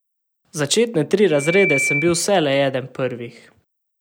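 A microphone is picking up the loudspeaker it feeds, and at 2.3 kHz the gain around that loop climbs past one, producing loudspeaker feedback squeal from 1.30 s to 2.32 s. The tone feeds on itself, swelling over roughly a third of a second into a steady, piercing whistle that reaches about the same loudness as the speech. It then sits on top of the talking until the loop is broken at 2.32 s.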